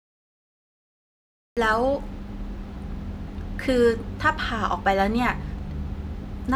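The clip opens with digital silence, and at 1.57 s the speech just appears mid-sound with no attack or fade-in. That's a classic cut-off start: capture began late, so the opening of whatever was being said got lopped off.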